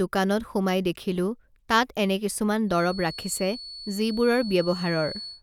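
From 2.65 s to the end of this speech clip, a feedback whistle sits behind the talker: a thin, steady tone at 4.4 kHz, roughly 15 dB below the speech, swelling and fading slowly in level. The likely cause is a loudspeaker-to-microphone loop held just at the edge of feedback, so one frequency keeps ringing without building up. On a spectrogram it shows as a single unbroken horizontal line at 4.4 kHz. The waveform barely shows it.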